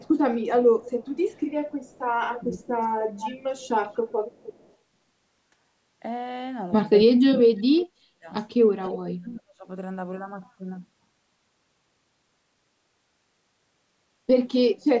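From 0.0 to 0.16 s the speech dips by about 15 dB, likely speech suppressed in double talk, with the echo canceller ducking the near talker while the far side speaks. From 0.8 to 4.74 s a faint copy of the speech trails 298 ms behind at about 20 dB down, likely an echo leak through a loudspeaker path the canceller did not fully clear. From 2.41 to 2.69 s the speech dips by about 15 dB, likely the same double-talk suppression. From 7.06 to 9.68 s, a stretch of about 2 s is cut hard by up to about 40 dB, likely double-talk suppression again. Brief echo scraps recur at 8.85 to 8.89 s, 321 ms behind and about 35 dB down, likely leaked echo, and at 14.81 to 14.85 s, 344 ms behind and about 40 dB down, likely leaked echo.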